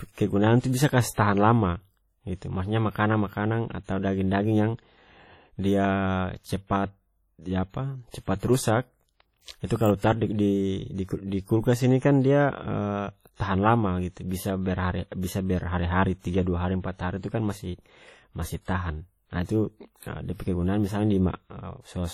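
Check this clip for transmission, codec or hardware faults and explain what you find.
Two codec-related faults can be heard in this speech recording: a general transform-codec coloration throughout, and pre-echo smearing before several sharp attacks.

WMA compression is the likely cause of the ringing, washy character and signal-dependent hiss that runs through the whole clip, with heavy damage consistent with a low bitrate around 32 kbps. Coarse quantisation zeroes weaker spectral lines. On a spectrogram, harmonics look patchy and broken, with noise filling gaps.

Pre-echo occurs at 0.60, 8.10, 9.42, 9.66, 13.36 and 19.43 s, each spreading 37 to 58 ms ahead of an attack. Quantisation noise sized for the loud onset fills the quiet lead-in of its transform block. It is heard as a brief hiss before a softened attack. The waveform shows low-level fuzz preceding each transient.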